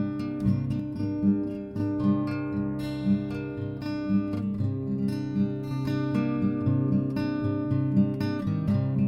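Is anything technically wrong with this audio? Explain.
Yes. From 0.80 to 5.71 s the music shows channel delay doubling. One channel arrives 40 ms late and is summed to mono, so every attack repeats as an equal-level slap.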